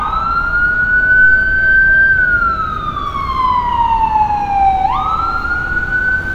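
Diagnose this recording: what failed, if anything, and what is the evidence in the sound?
Computer activity noise from 3.06 s to the end at 6.35 s: a buzzing, chirping pulse train at roughly 70 Hz, some 40 dB below the signal, independent of the sound itself. Analogue wiring stage: processor or graphics load currents shift the shared ground feeding the audio circuit.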